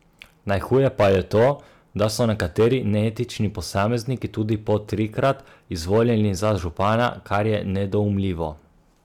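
Hard clipping hits the speech at 0.51–1.51 s, 2.02–3.07 s, 3.77–3.95 s, 4.69–5.31 s and 5.93–7.55 s, overdriven by about 5 to 9 dB, so the peaks are sliced flat. It sounds like crackle on the peaks, shows as squared-off waveform tops, and spreads into bright harmonic smearing on a spectrogram.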